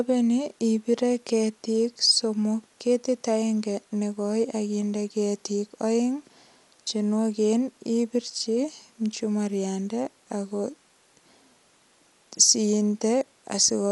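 From start to finish the speech is dull, with nothing above 11.4 kHz and rough, fluttering noise around tones, likely from Dolby Digital compression at a low bitrate near 64 kbps, whose decoder fills bare frequency lines with dither noise.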